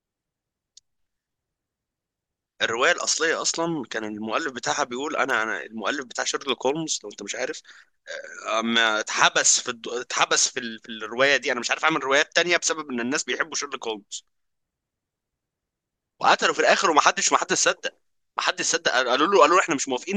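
No audible technical faults.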